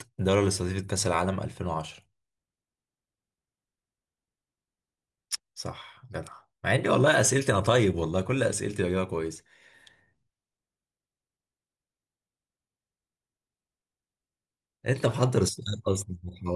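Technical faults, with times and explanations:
No technical faults can be heard anywhere in the recording.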